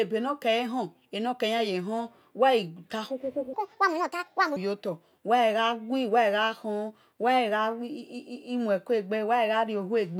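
At 3.53 s the speech suddenly jumps to 1.55 times its proper speed and stays there until 4.56 s. The pitch shoots up about seven semitones, so the voice sounds chipmunky and rushed. That's a section at the wrong speed, likely from a stretch being played back against the wrong clock.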